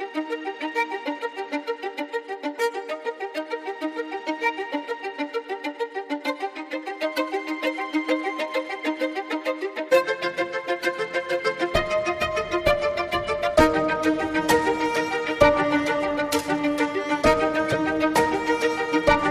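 Near the end of the audio, from 17.68 to 17.74 s, a corrupt frame decoded fault produces a brief glitch, roughly two damaged frames peaking around -10 dBFS. Bit errors misplace spectral energy, showing as a short, smeared vertical blotch on the spectrogram and a sudden waveform spike.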